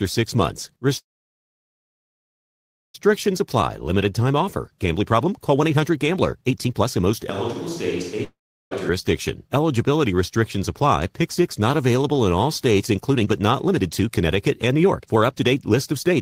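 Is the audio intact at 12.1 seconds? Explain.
Yes, at 12.1 seconds the speech plays through cleanly, with no dropout, click, distortion or other fault to be heard.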